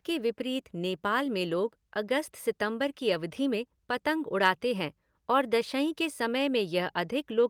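A speech clip with one brief rough patch: from 3.09 to 3.15 s, between "लोग अगस्त सितंबर की" and "में पतंग उड़ाते हैं", the sound turns grainier and noisier for a moment but never drops out. That is a lost packet rebuilt from error correction. The missing audio, about 40 ms, which fits two lost packets, was played from the lower-bitrate backup copy carried in the following packet, so the decoder filled the hole with a coarser version instead of leaving silence.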